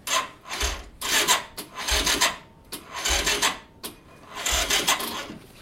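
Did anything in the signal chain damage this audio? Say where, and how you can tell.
No, nothing in the signal chain damaged this audio.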